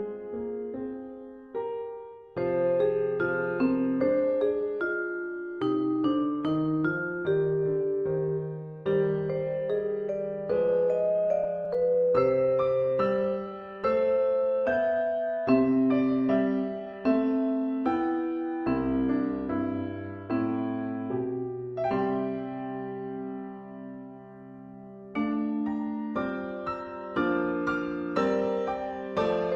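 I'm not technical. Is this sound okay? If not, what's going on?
No. Two brief faults can be heard.

Scattered short gaps, from 11.27 to 12.20 s: in under a second, about seven tiny pieces of the sound went missing in transit, none longer than roughly 15 ms. Each time, the receiving end covered the hole by stretching out whatever it had just played. It doesn't go silent, but you may notice a few quick ticks or small smeared hiccups across that stretch.

Jitter buffer slow-down, from 13.46 to 14.18 s: the receiver was running short on stored audio, so it bought time by repeating very small slices of the sound over and over. That added 68 ms, so this part plays at about 92% speed. The pitch stays the same, but things sound slightly drawn out, perhaps with a faint wobble.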